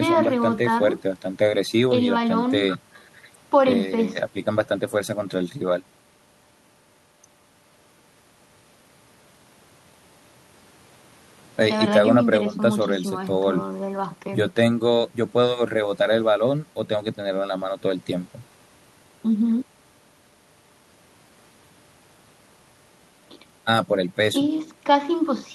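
The speech recording carries no audible technical faults anywhere along its signal path.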